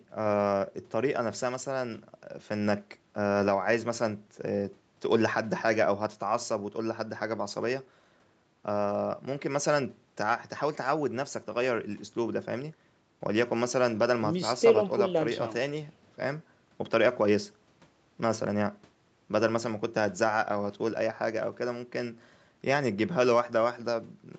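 No technical faults can be heard anywhere in the speech. The sound reaches up to about 8 kHz and nothing above, which fits a call path with microphone processing and an Opus codec working as intended.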